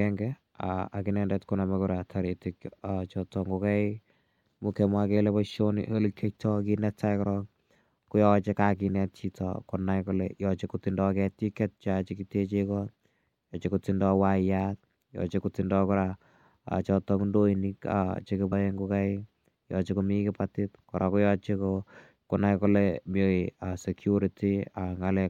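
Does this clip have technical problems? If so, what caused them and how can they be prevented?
Yes: compressed frames skipped at 18.51 s. The speech jumps ahead by roughly 50 ms, which points to a couple of frames of about 26.1 ms each being lost or rejected by the decoder. Overlap between neighbouring frames turns the join into a short smeared blip rather than a click. Preventing it means storing and transferring the file with integrity checks, and re-encoding from an intact source if corruption is found.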